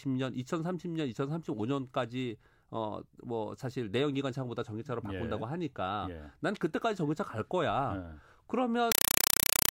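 At 8.92 s, a compressed stream is played as audio through to the end at 9.72 s. The receiving end stops decoding the digital link and treats the coded AC-3 data as if it were ordinary sample values, which fits a 192 kbps Dolby Digital stream. Each coded frame becomes a 4 ms burst of harsh noise followed by silent padding, repeating 31.25 times a second. The speech is replaced by very loud, rapidly chattering static.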